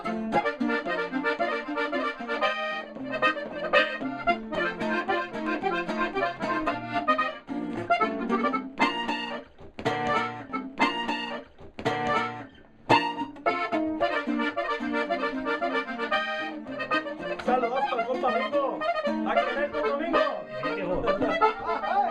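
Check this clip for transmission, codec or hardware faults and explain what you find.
One transmission fault is present. A stream segment is repeated from 10.49 to 12.49 s. The player queued the same chunk twice. So 2 s of sound plays again after a small blip at the jump back. The timeline then continues from there.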